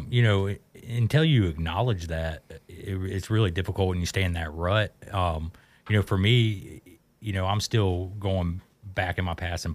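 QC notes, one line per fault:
No faults detected.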